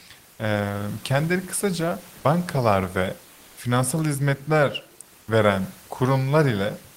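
Comfort noise in place of the background runs from 3.33 to 3.57 s in this speech clip. For about 240 ms the room noise, sitting about 29 to 31 dB below the speech, becomes a steady, featureless hiss at the same level. This is likely discontinuous transmission such as Opus DTX, where the receiver synthesises filler noise during a detected pause.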